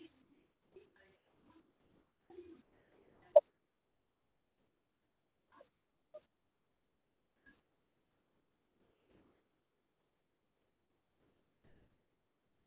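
Sound chopped by the voice detector runs from 0.22 to 2.3 s and from 2.62 s to the end of this speech clip. It is likely caused by the sender's voice detector cutting out, which replaced about 1.7 s and 9.4 s of sound with comfort noise. The result is choppy. The call path's 4 kHz band limit is audible throughout.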